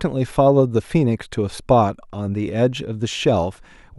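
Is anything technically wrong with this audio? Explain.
No, nothing technically wrong can be heard in this speech recording.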